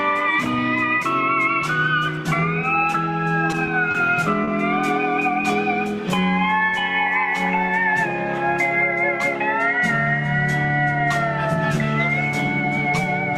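At 3.91–3.96 s and again at 4.44–4.49 s there is a short stall from a late packet: the jitter buffer ran dry, so the receiver stretched the preceding sound by 30 ms, then resumed without loss. Each stall briefly smears the audio with a faint buzz or dip, and the later playback delay grows by 30 ms.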